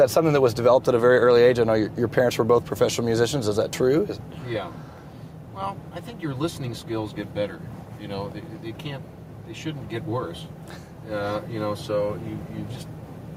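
Gain pumping runs through the whole clip. The swing is around 5 dB. Loud and soft passages sit unnaturally close in level, so the sound feels squashed. The likely cause is input gain set far too high for the microphone. A fast limiter or compressor then clamps down on each peak and releases in the pauses.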